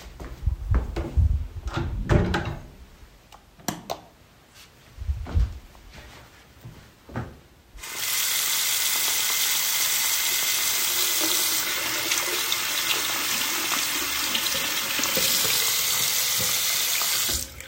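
No technical faults can be heard anywhere in the audio; the signal stays continuous and intact throughout.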